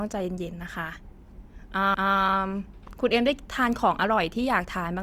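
CD skip at 1.94 s: the laser lost its track and landed on a different turn of the disc's spiral, so the player muted for a few milliseconds and resumed elsewhere. The speech gives a brief tick and then an abrupt jump in continuity.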